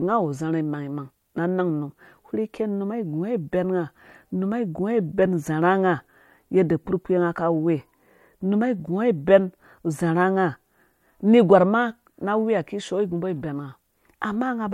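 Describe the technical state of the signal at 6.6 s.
At 6.6 s the signal is intact, with no audible fault at that moment.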